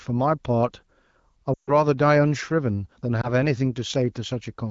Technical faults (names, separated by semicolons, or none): lost AMR speech frames